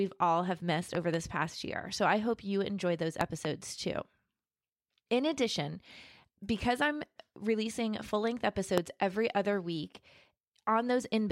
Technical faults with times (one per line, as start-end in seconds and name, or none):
0.95-1.16 loud pop
3.21-3.47 loud pop
8.78-8.80 loud pop